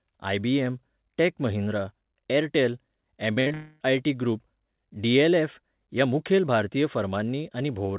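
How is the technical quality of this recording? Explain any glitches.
The recording carries a cluster of network glitches packed into about half a second, from 3.34 to 3.82 s, just after "महिंद्रा ऍरटॅल". The call path caps the audio at 4 kHz, which fits a narrowband G.711 mu-law telephone codec.

Short concealed packet loss occurs twice, at 3.34–3.38 s and again at 3.48–3.52 s. Each time about 20 ms of audio failed to arrive. The receiver covered the hole by extending the preceding sound for roughly 21–23 ms and then crossfaded back into real audio, so each one is heard as a brief smear or wobble. On a spectrogram, harmonics or noise bands stretch unnaturally flat for a sliver of time. In the waveform, a repeated, slightly smoothed cycle pattern sits where the real detail should be.

A burst of packet loss runs from 3.40 to 3.48 s, wedged between those two short losses. About 60 ms in a row went missing, and the concealment filled 57 ms of it. 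The last sound was continued and turned down as the gap went on, so it comes across as a short held buzz or hiss that sags before the audio jumps ahead. A spectrogram shows smeared, static harmonics fading in level. The waveform envelope tapers and then resumes abruptly.

A long network dropout follows at 3.54–3.82 s, about 260 ms of lost audio that was almost entirely concealed, with no true silence left. The sound is a drawn-out buzz or hiss that decays instead of continuing the real signal, and the material in that stretch is simply gone. The likely cause is a longer stall in packet delivery. On a spectrogram it appears as frozen, gradually dimming bands with no new onsets. The waveform shows a repetitive, shrinking pattern.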